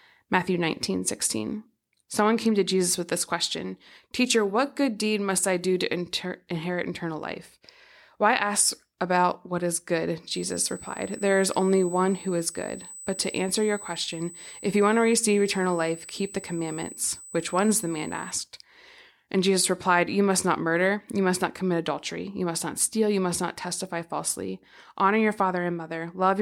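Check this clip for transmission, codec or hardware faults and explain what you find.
One hardware fault is present: USB whine. From 10.31 s to 18.31 s a steady 8 kHz tone, roughly 20 dB below the speech, rides under the recording. USB high-speed traffic pulls current in 125-microsecond microframes, and that ripple reaches the audio through shared power or ground. It sounds like a thin, fixed-pitch whistle, and on a spectrogram it appears as a sharp horizontal line at 8 kHz spanning exactly those eight seconds.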